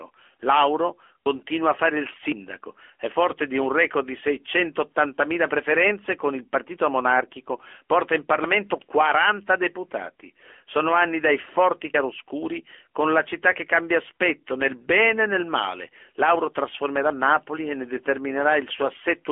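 From the start, the speech carries the buzzy, synthetic edge of the AMR narrowband mobile codec, consistent with its 10.2 kbps mode. The vocal-tract model rebuilds the voice from a few pulses per subframe, leaving plainly audible damage. A spectrogram shows a hard ceiling near 3.6 kHz, with energy confined to the 300 Hz to 3.4 kHz telephone band.

At 1.26 s and again at 11.94 s there is an abrupt jump in the sound. Around 40 ms and then roughly 70 ms of audio vanish with no silence in between, most likely a dropped buffer (overrun), where the program fell behind the hardware. The waveform shows a sudden discontinuity at each join.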